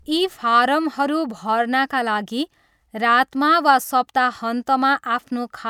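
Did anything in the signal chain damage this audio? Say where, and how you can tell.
No, nothing in this speech recording stood out as damaged by any stage of the signal chain when I listened to it.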